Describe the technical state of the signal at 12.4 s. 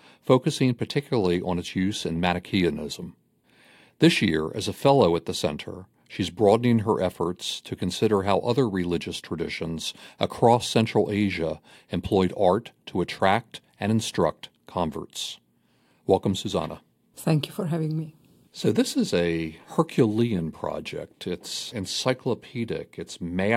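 No fault is audible at 12.4 s, and the signal is intact at that moment.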